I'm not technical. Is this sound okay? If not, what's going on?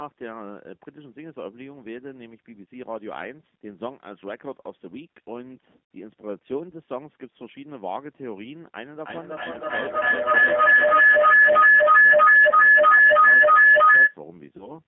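No. Three separate problems can be heard.

First, the call runs through a G.729 codec, a low-data phone compressor that rebuilds the voice from a simplified model instead of sending it directly. It keeps only a narrow phone-line band, roughly 200 Hz to 3.5 kHz, so the speech sounds thin, muffled and a little rough or robotic from start to finish.

Second, there is VoIP packet loss concealed by the speech codec. Small pieces of the audio never arrived, and the receiving end guessed at them by stretching whatever it had just heard. At 5.95 s about 60 ms is missing, long enough to be heard as a brief buzzy or noisy smear that fades. Shorter gaps of about 20 ms each follow between 12.50 and 12.54 s and between 14.57 and 14.79 s, where the sound briefly turns weak or distorted.

Third, a feedback howl starts at 9.0 s and lasts until 14.22 s. Two devices in the same room were probably both on the call, so sound from one loudspeaker went back into a microphone and round the loop again, growing each time. 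It builds into a loud whistle around 1.5 kHz, with the loop going round about every third of a second, and becomes much louder than the speech.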